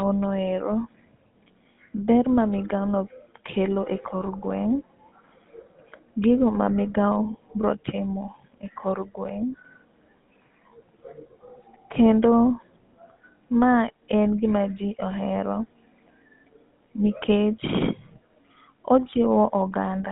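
From start to finish the speech carries the signature of the GSM full-rate codec. Everything below about 150 Hz and above 3.6 kHz is missing, and the voice has a buzzy, gravelly roughness, which fits the 13 kbps scheme that rebuilds the vocal tract from a coarse pulse excitation. That grit sets it apart from simple telephone band-limiting or G.711, which sound just as narrow but stay smooth and clean.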